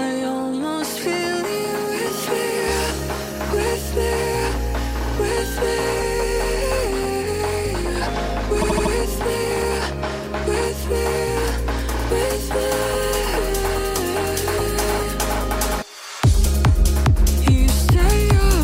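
Repeated frames occur from 8.61 to 8.92 s. A short block of about 78 ms, which fits a run of roughly three compressed frames, was written or sent again, so the decoder played the same slice of sound four extra times in a row. The result is a rapid stutter, and the audio from that point on arrives about 0.31 s later than it should.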